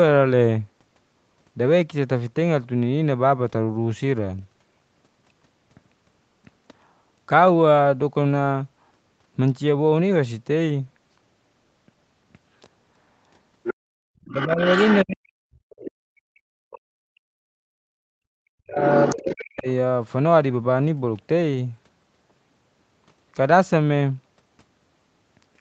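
Other side's voice leaking through, from 13.63 to 15.01 s: a second voice, about 5 dB below the talker, comes through, likely because the echo canceller left loudspeaker playback in the microphone signal. Background gated by the echo canceller, 13.81 to 14.03 s: the room sound drops out for roughly 150 ms, by about 35 dB, as the canceller clamps the microphone during playback. Speech suppressed in double talk, 14.28 to 15.64 s: the talker's own voice dips by roughly 40 dB in pieces totalling about 0.7 s, likely because the canceller could not separate it from the echo while both sides spoke. The leak returns at 15.70 to 15.91 s, about 15 dB down. The gating returns from 15.93 to 17.6 s, removing the background for about a second at up to about 36 dB, with a brief leak at 16.71 to 16.79 s about 25 dB down. Double-talk suppression cuts the talker again from 17.88 to 19.67 s for around 1.5 s in total, while the far voice leaks through from 18.92 to 19.44 s, about 10 dB below.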